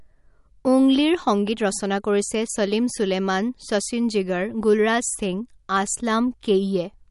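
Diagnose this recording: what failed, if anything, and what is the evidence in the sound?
The speech sounds watery and swirly throughout, with nothing above 11.2 kHz; this is likely MP3 compression at the codec stage, consistent with a low bitrate near 48 kbps.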